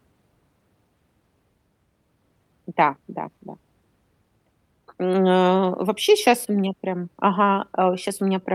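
Nothing stood out on listening to the speech in this clip.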